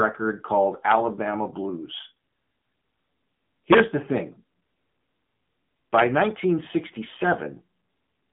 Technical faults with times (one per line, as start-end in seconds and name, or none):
0.00-8.32 AMR narrowband mobile codec